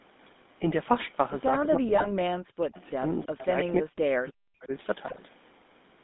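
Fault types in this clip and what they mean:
GSM full-rate codec: The whole recording carries the buzzy, gravelly roughness of the original 13 kbps GSM coder, which rebuilds the voice from a vocal-tract filter fed by sparse, regularly spaced pulses. The line band runs from about 200 Hz to 3.6 kHz, so nothing above that survives. Unlike bit errors, this coarseness is steady and present in every moment rather than bursting out in isolated squawks.
Echo leak: Three brief scraps, at 1.64 s, 3.4 s and 4.61 s, each lasting only a few tens of milliseconds, bring back a faint delayed copy of the voice arriving 323 ms late. They sit roughly 15, 20 and 25 dB below the speech, likely because a loudspeaker's echo slipped past the canceller. It adds sound, where double-talk suppression takes sound away.
Speech suppressed in double talk: From 1.69 s to 4.74 s the talker's voice repeatedly sinks, thins and drops out, adding up to around two seconds of damage, with the deepest dips approaching 40 dB. 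This is likely an echo canceller turning everything down while both sides spoke at once. It removes the talker's own voice, whereas echo leak adds a stray delayed copy on top of it.
GSM bit errors: Two bursts, from 1.89 to 2.07 s and from 5.08 to 5.19 s, break the voice into squawks, pops and gargling as corrupted filter, pitch and gain values reach the decoder. The bit error rate is 1.64% in the first and 4.09% in the second, with about nine and five damaged frames. These sudden bursts of distortion stand apart from the codec's constant, even roughness.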